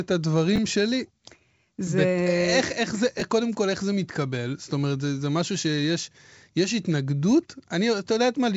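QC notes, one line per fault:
0.56–0.58 s and 3.19–3.22 s, chunks out of order: an 11.6 ms block plays one slot late, swapped with its neighbour, briefly jumbling the sound. Its three hard joins show as waveform steps and thin vertical spectrogram stripes.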